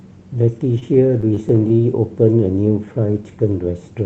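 From 0.79 to 1.81 s, packets reach the receiver late, so its jitter buffer repeatedly runs dry. The result is repeated stalls (stutter): nine short holds, the longest about 23 ms, where the last sound is stretched to cover 141 ms in total. Nothing is lost, but the speech drags and catches.

From 2.69 to 3.12 s, the jitter buffer is short of reserve and performs a slow-down, repeating single pitch periods to add 66 ms. The speech runs at about 86% speed at unchanged pitch, sounding drawn out, over the dulled sound of a call codec that cuts off around 8 kHz, consistent with Opus at about 32 kbps.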